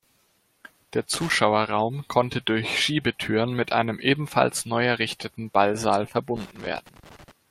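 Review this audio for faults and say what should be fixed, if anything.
Loose connector crackle appears from 1.14 to 1.35 s and from 6.36 to 7.31 s. A worn contact breaks intermittently, chopping the speech into irregular scratchy bursts. Clean or replace the connector and secure the cable against movement.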